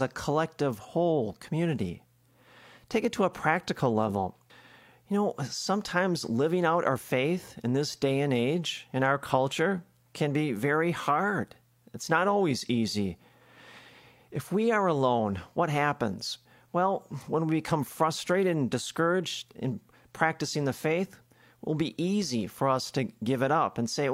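Nothing in this recording stands out as a technical fault; the speech just carries along from beginning to end with no dropouts, glitches or other disturbances to point to.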